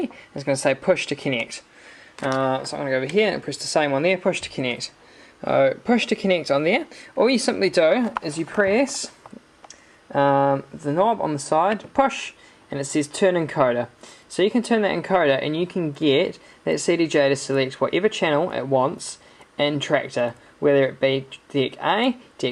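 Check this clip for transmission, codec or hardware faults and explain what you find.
Nothing here points to a transmission, codec or hardware problem, so there's nothing to flag.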